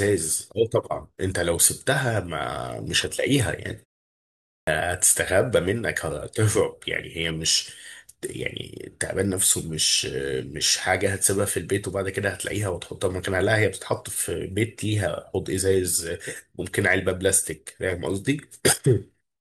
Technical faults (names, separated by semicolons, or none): clipped start after a pause